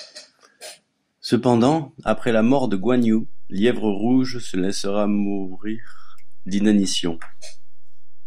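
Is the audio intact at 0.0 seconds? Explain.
Yes, the audio is intact at 0.0 seconds, with no audible fault at that moment.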